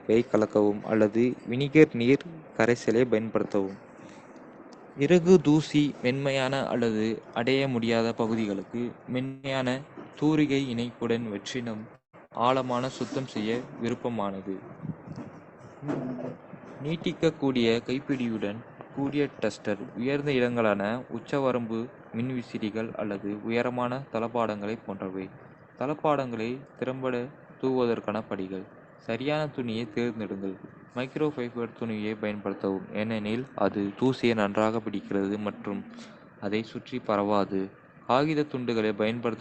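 At 9.25–9.46 s and 11.95–12.16 s, likely a long network dropout: about 0.18 s goes missing, bridged by a fading continuation of the last sound, with the second trailing into silence. At 12.25–12.33 s a burst of packet loss drops about 60 ms, covered by a brief fading tail before speech resumes further on.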